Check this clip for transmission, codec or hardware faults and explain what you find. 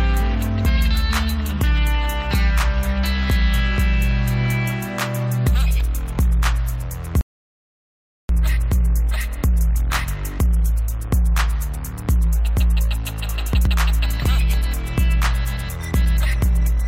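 One transmission fault is present. A rebuffering stall, 7.21 to 8.29 s: the player ran out of data and paused, adding 1.08 s of silence. Unlike a dropout, the sound resumes where it stopped, with nothing skipped.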